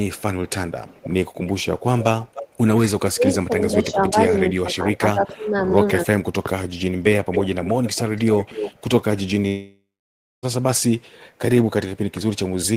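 From 0.14 to 0.51 s a very faint trailing copy of the speech sits about 35 dB under it, lagging by 329 ms. From 0.87 to 2.43 s the same copy returns much more clearly, about 15 dB down with a 298 ms lag, giving a hollow doubled quality. This is echo leak: the far end likely plays the call over a loudspeaker, and its echo canceller let part of the microphone pickup slip back down the line.

Between 2.33 and 2.58 s the room sound behind the speech sinks briefly, up to about 13 dB, for roughly a fifth of a second in total, then recovers. This is background gated by the echo canceller. While its loudspeaker was playing, the canceller pulled its microphone down hard and released it once the playback eased, so the ambience dips and comes back rather than running steadily.

From 2.88 to 6.35 s the speech keeps ducking. It loses level in patches, at worst by around 30 dB, and some pieces all but vanish, adding up to roughly two seconds of damaged sound across that span. 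This is speech suppressed in double talk. The likely cause is that both ends spoke at once, and the canceller, unable to separate its own talker from the loudspeaker echo, turned everything down.

Echo leak returns from 7.01 to 8.81 s and is the most prominent yet. The delayed copy trails by 271 ms at only about 10 dB below the speech.

At 9.47 s the sound turns into a buzzy continuation of what came just before, which fades out and gives way to about 0.6 s of silence. Speech resumes at 10.46 s, with close to a second of material simply missing. This is a long network dropout. Audio likely stopped arriving for about 960 ms, and the receiver filled the gap with synthetic continuation before falling silent, so the lost audio was never played.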